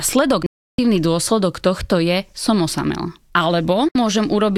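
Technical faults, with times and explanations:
0.46–0.79 s and 3.89–3.96 s, digital broadcast dropout: the receiver stopped getting frames that passed their checksum and muted until clean ones returned, so the speech cuts to silence for 320 ms, then 64 ms, consistent with roughly ten and two frames lost, and that speech never comes back.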